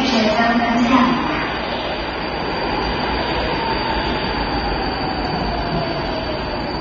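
Everyday sound runs through the whole clip with clear AAC compression damage from start to finish. Nothing is present above about 6.9 kHz, so the top end is cut off flat and the material sounds dull. Remaining bands carry a smeared, warbling texture where the encoder has starved the spectrum of bits and left gaps. The likely cause is an AAC-LC encode at a very low rate, and the depth of damage fits roughly 24 kbps.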